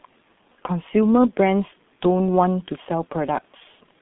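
From start to finish the speech sounds muffled and hoarse, with consonants smeared and no energy above about 3.9 kHz, inside a narrow telephone band of roughly 150 Hz to 3.6 kHz. This is heavy G.723.1 codec damage. The coder packs speech into 30 ms frames at a very low rate, consistent with its 6.3 kbit/s mode, and refreshes its model of the voice too slowly to follow quick sounds, so transients blur and the timbre turns rough.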